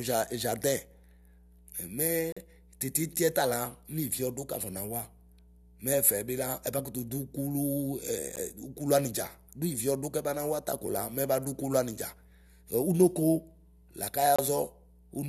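A steady low 60 Hz tone sits roughly 30 dB under the speech for the whole clip: mains hum, with a ground loop or nearby transformer coupling the power line in. Hard-edged silent holes cut the speech at 2.32 to 2.37 s, at 8.36 s, and at 14.36 to 14.39 s, lasting about 42, 13 and 26 ms and recurring every 6 s. This is a gap between stream segments, where mismatched segment time stamps leave a hole the player fills with silence, without losing any audio.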